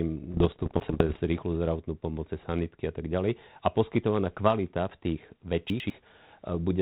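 From 0.30 to 1.17 s, bit errors on an ADPCM link, with roughly 0.7 bits in a hundred flipped, knock the decoder's step size and predictor off track. Each error rings on briefly as pops and rough bursts with level jumps, seen as scattered vertical spikes and smeared broadband patches, ending before "rýchlu zdravotnú pomoc cez". Inside that stretch, 0.8 to 1.0 s, and again at 5.7 to 5.9 s after "poskytovaná kvalita v tých", chunks out of order appear: a 100 ms chunk plays one chunk late, swapped with its neighbour. The sound jumps back and forth, and the waveform shows hard discontinuities at the three joins.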